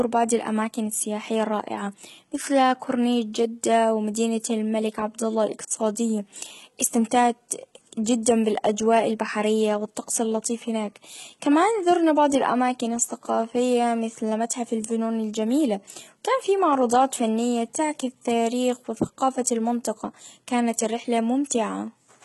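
Throughout, s sounds are gritty and lispy, with nothing above 11.8 kHz. Likely heavy HE-AAC compression, faking the treble from copied lower bands.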